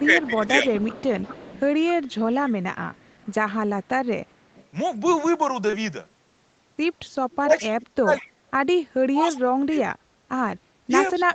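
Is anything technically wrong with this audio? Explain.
Yes, several call-path faults are audible in this speech.

Echo leak: from 0.0 to 4.67 s, and again at 7.35 to 8.25 s, 9.37 to 9.78 s and 11.13 to 11.22 s, the far end's echo canceller likely let its loudspeaker pickup through. A faint copy of the voice trails about 204 ms behind, roughly 20 dB down (nearer 25 dB at 9.4 s).

Speech suppressed in double talk: with both sides talking at once, the echo canceller likely could not tell the talker from the echo and turned everything down. From 0.02 to 0.69 s the voice dips by around 10 dB. From 7.40 s to the end it sinks far deeper, up to about 30 dB, fading and breaking up.

Short concealed packet loss: two consecutive 20 ms gaps, at 5.67 to 5.71 s and 5.71 to 5.75 s, never reached the decoder in time. The receiver extended the preceding sound to fill them, leaving a brief smeared wobble where a short consonant-like detail can blur away.

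Background gated by the echo canceller: from 10.72 to 10.89 s the canceller clamped the microphone while the loudspeaker played. The room tone drops by about 16 dB for roughly 150 ms, then returns once the gate releases.

The Opus call path limits the audio to nothing above 8 kHz, which is expected for this link.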